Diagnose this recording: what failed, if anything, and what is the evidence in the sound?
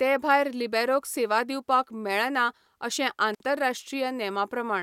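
Looks like an intermittent contact in the analogue wiring. Around 3.34 to 3.42 s the speech drops out for roughly 52 ms, with crackle at both edges and faint hiss in the gap. That's a loose plug or cable briefly opening the signal path, then reconnecting.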